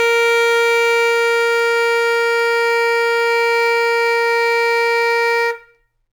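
Sample clock jitter runs throughout this music clip: the converter's clock wanders by around 4 microseconds, so each sample lands slightly off time. Steep, bright passages suffer most, leaving a grainy hiss roughly 30 dB below the music.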